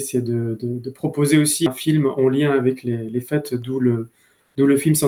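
Compressed frames skipped at 1.66 s: the audio jumps ahead by around 150 ms, which fits two missing frames of about 85 ms.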